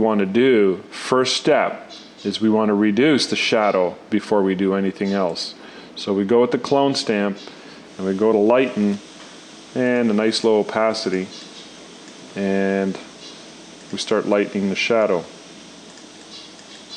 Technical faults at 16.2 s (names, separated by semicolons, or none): none